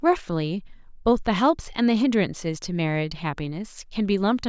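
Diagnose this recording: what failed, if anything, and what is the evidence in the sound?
Nothing in the speech stood out as a fault on listening, so no failing stage can be pointed to here.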